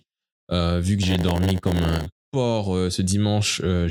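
Right after "vu que", from 1.02 to 2.07 s, there's a block size mismatch (padded). Each block comes up short and gets topped up with silence, so a 100 Hz buzz rides on the speech and it drags to about 0.92 speed, timbre unchanged, until "porc euh ce".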